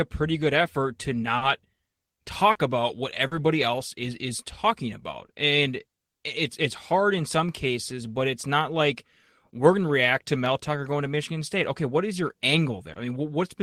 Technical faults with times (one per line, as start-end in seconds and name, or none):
1.37-1.43 short concealed packet loss
2.51-2.57 short concealed packet loss
3.27-3.33 short concealed packet loss
12.93-12.97 short concealed packet loss